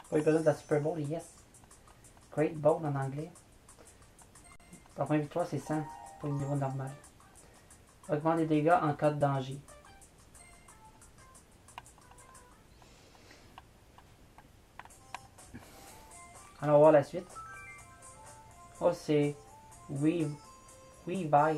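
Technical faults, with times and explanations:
2.58, 6.39, 9.20, 17.05 and 21.13 to 21.15 s: damaged data in a compressed stream. Corrupted bytes make the decoder misread or reject frames and hunt for the next valid header. Each event is a brief chirp, squawk, click or hole lasting under about 20 ms. Unlike a buffer underrun, these come from garbled decoding rather than frozen output.
4.56 to 4.60 s: underrun with held sample. The output buffer emptied and the converter held its last value for about 41 ms, so the waveform goes flat and the sound stops with little click. Playback then resumes where it stopped, so nothing is skipped and the restart is soft.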